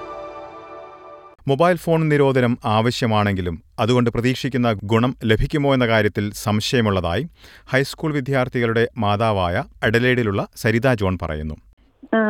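No technical faults can be heard anywhere in the clip.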